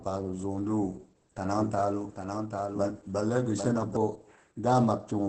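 Throughout, the speech sounds muffled, hoarse and slightly robotic, with nothing above 8.5 kHz: heavy Opus voice compression, its wideband SILK coding consistent with roughly 10 kbps. From 1.59 to 3.97 s, a second full-band copy trails about 0.7 s behind, roughly 5 dB quieter, starting and stopping abruptly, likely a doubled audio track.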